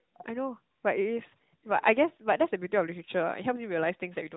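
No technical faults are audible.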